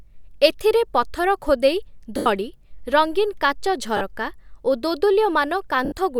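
Lost LE Audio frames cut the Bluetooth link three times: at 2.17 to 2.26 s after "ଏଥିରେ ପଥର ଖୋଦେଇ", 3.97 to 4.01 s after "ରଙ୍ଗୀନ୍ କାଚ", and 5.85 to 5.92 s. The decoder repeats the last spectrum with scrambled phase, fading it, so the speech briefly blurs into a noisy smear.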